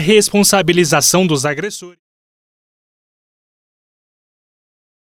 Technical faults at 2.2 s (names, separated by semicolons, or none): none